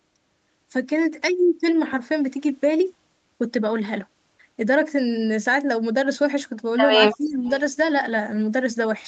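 Speech, and the trouble sits in a short stretch near the end. At 7.12 to 7.17 s and again at 7.46 to 7.51 s you can catch a faint delayed copy of the voice trailing about 319 ms behind, roughly 20 dB under the speech the first time and fainter, around 30 dB down, the second. That's an echo leak, likely a speakerphone on the far end whose echo canceller didn't scrub everything its mic picked up and sent the residue back. Between those two scraps, from 7.17 to 7.49 s, the talker's own voice sags, dropping by something like 20 dB at its worst over about 0.3 s. That's likely speech suppressed in double talk: with both sides sounding at once, the canceller couldn't tell the local talker from the loudspeaker echo and pulled the whole lot down. The top end of the clip stops at 8 kHz, in line with a call path running Opus at 32 kbps.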